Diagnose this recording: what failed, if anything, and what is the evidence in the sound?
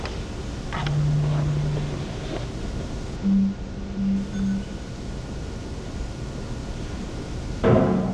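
A channel delay (comb filtering) fault at the driver or buffer stage: from 3.16 to 4.16 s one channel lags by a couple of samples before the mono sum. Cancellation starting around 10 kHz dulls the sound's top end.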